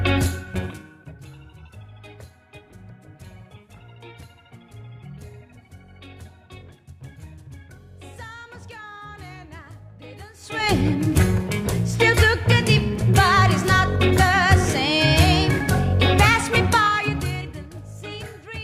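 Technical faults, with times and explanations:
0.32–1.24 s, zipper noise: the level was pulled down by roughly 25 dB in unsmoothed 2 dB jumps, about fifteen a second, so each jump clicks and the fade ticks audibly.
10.32–10.72 s, zipper noise: a rise of roughly 25 dB was applied in 2 dB steps, about thirty a second, and each step clicks, so the clicks blur into a quick zipping rasp.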